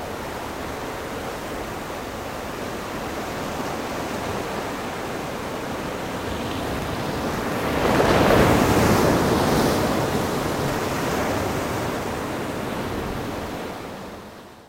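From 6.51 to 7.73 s a gritty, tearing crackle rides over the sound, then stops. This is processor overload crackle: the processor repeatedly missed its deadlines for very short buffers, well under a millisecond each, and every miss left a hard-edged silent gap.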